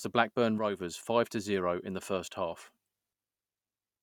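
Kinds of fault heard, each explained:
One channel drops out: from 0.58 to 0.80 s the speech falls abruptly by about 6 dB and then recovers just as suddenly, the pattern you get when one side of a stereo pair is likely lost and the remaining side alone feeds the mono sum.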